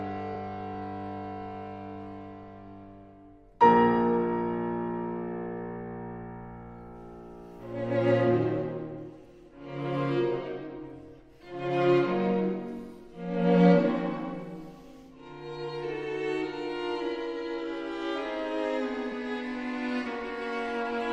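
At 12.54 s there is damaged data in the compressed stream: a brief, roughly 14 ms disturbance. The decoder receives corrupted frame bytes, misinterprets them and loses sync until it finds a valid frame header, producing a short glitch in the sound.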